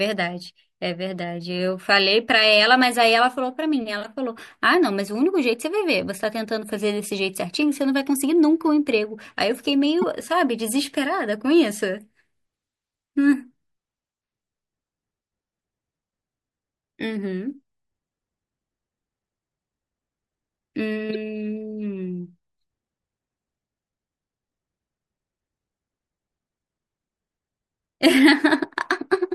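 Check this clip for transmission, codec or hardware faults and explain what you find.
Three short bursts point to a codec fault: corrupt frame decoded, at 4.03–4.05 s, 10.02–10.04 s and 21.09–21.16 s. In each, damaged compressed data was decoded rather than concealed, so misread gains and codes spread energy into the wrong bands for a couple of frames, or a few at 10.02 s. Each is heard as a brief chirp or noisy blip over the speech, peaking around -20 dBFS, with the 10.02 s event louder, near -10 dBFS.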